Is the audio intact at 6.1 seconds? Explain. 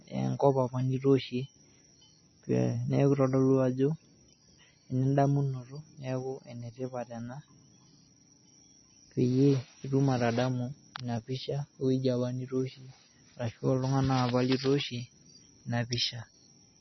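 No. At 6.1 seconds the speech carries the same damage heard across the whole clip, consistent with heavy MP3 compression. Nothing is present above about 5.9 kHz, so sibilants sound dull and clipped. The remaining band sounds watery and swirly, and consonant attacks are smeared. This is likely the encoder running short of bits, which fits a low bitrate around 24 kbps. It cuts the treble at a fixed point and drops weak frequency lines that flicker on and off between frames.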